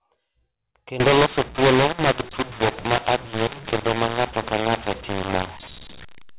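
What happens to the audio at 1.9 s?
At 1.9 s the G.711 telephone stream, coded with mu-law, is being decoded as A-law, a mu-law and A-law mix-up running from 1.00 s to the end. The mismatched curves scramble sample levels, so speech turns harsh and distorted and pauses fill with noise.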